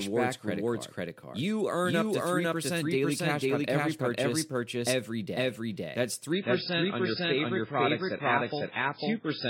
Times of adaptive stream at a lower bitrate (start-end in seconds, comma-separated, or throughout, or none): 6.32-9.50